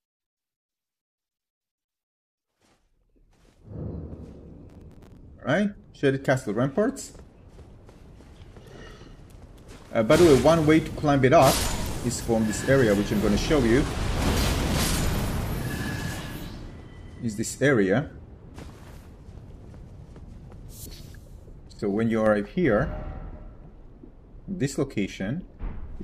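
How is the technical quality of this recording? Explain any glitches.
One glitch stands out. Processor overload crackle runs from 4.70 to 5.17 s. The processor repeatedly misses its deadlines for very short buffers, around 5 ms each, and each miss replays a fragment of old audio with hard edges. Dozens of these in a row produce a gritty, tearing crackle over the sound that stops once the load eases.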